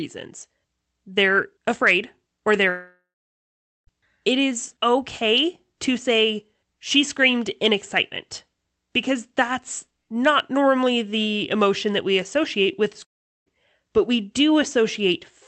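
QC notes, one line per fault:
2.69–3.89 s and 13.03–13.48 s, long network dropout: The likely cause is packets that never arrived, leaving the receiver to stretch the last sound it had. The sound smears into a fading buzz, then goes quiet. About 0.83 s of the 1.18 s first gap and 0.41 s of the 0.45 s second gap are silence. Sound resumes afterwards with that stretch missing.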